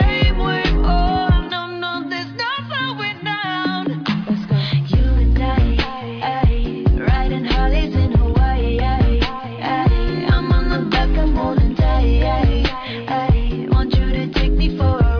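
No faults detected anywhere in the recording.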